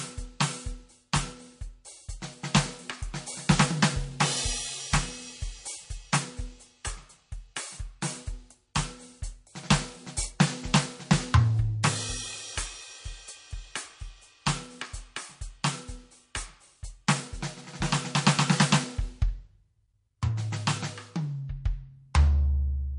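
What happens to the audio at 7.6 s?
At 7.6 s the music carries the same MP3 compression heard throughout, likely from a low-bitrate encode near 40 kbps, with nothing above 10.6 kHz. Weak frequency lines flicker on and off, giving a watery, swirly texture. A spectrogram shows a hard ceiling at 10.6 kHz and speckled gaps below it.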